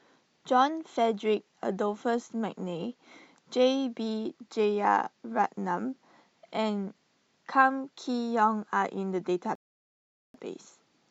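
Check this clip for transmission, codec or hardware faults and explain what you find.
One fault, a rebuffering stall from 9.55 to 10.34 s. The player exhausted its downloaded audio and paused until more data arrived, so the speech drops to silence for about 0.79 s, then resumes exactly where it stopped, with nothing lost but time added.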